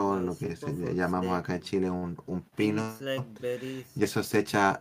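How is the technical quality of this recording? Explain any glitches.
The technical quality of this recording holds up, with no glitches to explain.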